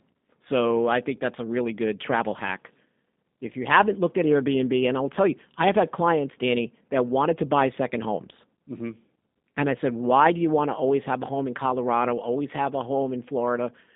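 Throughout, G.729 codec coding, consistent with 8 kbit/s G.729A, rebuilds the speech from a filter and sparse pulses, leaving it rough, synthetic and band-limited to roughly 200 Hz–3.7 kHz.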